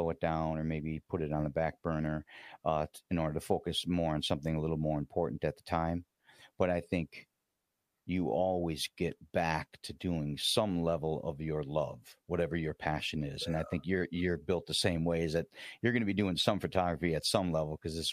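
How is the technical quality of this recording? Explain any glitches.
No glitches turn up anywhere in this recording, so there is nothing to explain.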